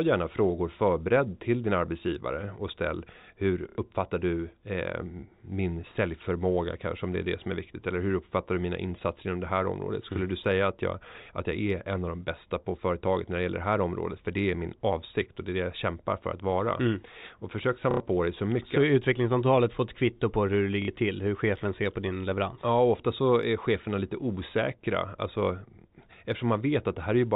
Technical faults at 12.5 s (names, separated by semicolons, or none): none